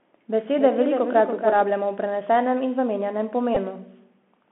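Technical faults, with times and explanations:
Throughout, Bluetooth CVSD headset codec: the speech sits in a narrow phone band of roughly 200 Hz to 3.4 kHz, and the one-bit delta coding with its adapting step is plainly audible. Sibilants go scratchy, loud bright bits smear, and a grainy hiss rides under everything.
0.00 to 1.72 s, doubled audio track: a second full-band copy of the speech trails about 0.3 s behind, roughly 5 dB down. There's no room colour on it and it cuts off abruptly, most likely a second capture path or an edit holding two copies.
3.55 to 3.58 s, Bluetooth headset packet repeated: about 15 ms of the link dropped out and the chip kept replaying the last good packet every 3.75 ms. That gives a short, steady buzz near 267 Hz until clean packets resume.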